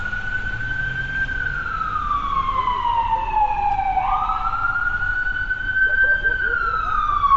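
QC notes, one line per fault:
Throughout: Bluetooth LC3 compression, likely, with nothing above 7.7 kHz and a plainly grainy, noise-filled top end, fitting a low bitrate around 32 kbps.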